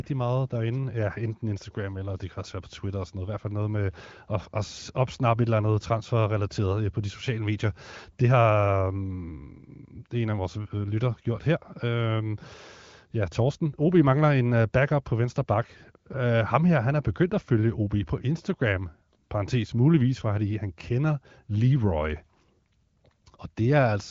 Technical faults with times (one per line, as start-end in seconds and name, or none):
none